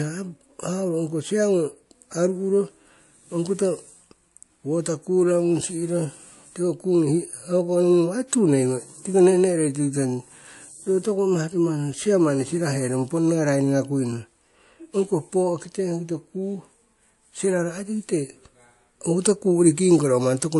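Throughout the speech the top end stops abruptly at about 11.3 kHz, and two kinds of compression damage sit on top of each other: a watery, swirling smear alongside a second, different graininess. The likely cause is transcoding between lossy codecs. The sound points to a low-rate MP3 encode followed by re-encoding to WMA at a higher rate. The later encoder spent its bits preserving the first codec's artefacts and added its own, and the earlier cut-off remained.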